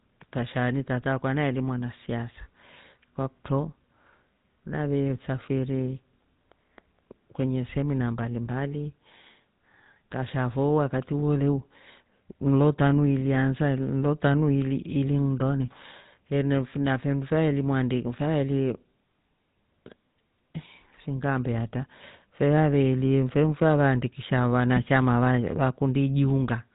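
From start to finish the speech has passed through a GSM full-rate codec at what sounds like 13 kbps. The codec rebuilds the voice from a vocal-tract model excited by sparse, regularly spaced pulses, and discards everything above 4 kHz, so the audio is band-limited, muffled and plainly buzzy and gravelly.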